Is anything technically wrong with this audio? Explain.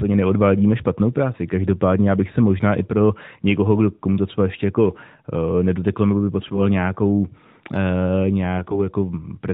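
Yes, there are AMR bit errors at 6.40–6.68 s, right after "nedoteklo nebo by", and again at 8.58–8.81 s. A few percent of the weakly protected bits arrived flipped, so the pulses and the fine pitch, gain and spectrum values go wrong. The speech keeps its pitch and level but turns briefly hoarse, scratchy and gargly. The underlying narrowband mobile codec sound, which fits AMR-NB at about 12.2 kbps, is only lightly coloured.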